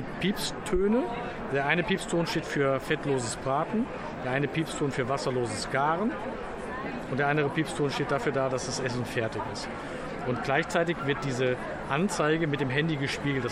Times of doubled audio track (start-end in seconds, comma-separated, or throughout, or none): none